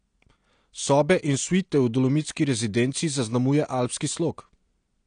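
AAC compression damage runs through the whole speech clip, from start to finish. Nothing is heard above about 9.8 kHz, so the top of the spectrum is simply gone, and the damage is plainly audible: the sound is dull and smeared, with a watery, fizzy texture on sibilants and held vowels. The likely cause is AAC-LC coding at a low rate, one that fits about 32 kbps, where the encoder lowers its cut-off and quantises the remaining frequency lines so coarsely that gaps and swirling artefacts appear.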